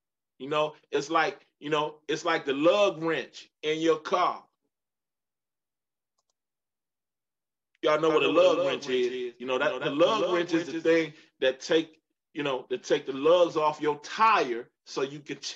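From 8.10 s to 10.88 s a doubled audio track appears: a full-band copy trails the original by around 200 ms, about 5 dB quieter, with no decay or room colour. It starts and stops abruptly, likely from a slower second capture path.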